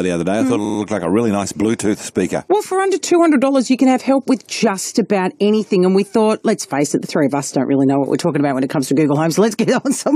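Repeated frames occur from 0.64 to 0.78 s. A block of about 46 ms of compressed audio, which fits two frames of roughly 23 ms each, was delivered again and played three more times in a row. The decoder had no way to tell, so the same slice sounds four times in total, adding about 139 ms to the audio. It is heard as a short mechanical stutter.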